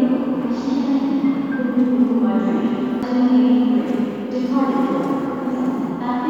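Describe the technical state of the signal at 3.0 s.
A CD skip occurs at 3.02 s. The laser jumped to another turn of the disc's spiral. Playback mutes for a few milliseconds, giving a brief tick. The sound then resumes from a different point, a sudden jump of one or more disc turns.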